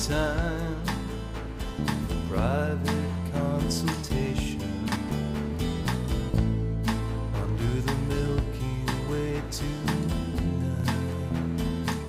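Chunks out of order at 4.88–4.96 s and 10.76–10.84 s: two 40 ms blocks swap places, giving a jumbled blip whose three hard joins show as waveform steps and thin vertical spectrogram lines.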